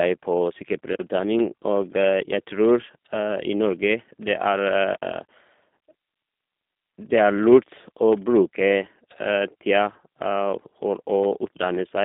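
Speech, with G.729 codec damage throughout. The sound is narrowband, 200 Hz to 3.7 kHz, nothing above 3.8 kHz. Plainly rough and synthetic, which fits an 8 kbit/s G.729A stream.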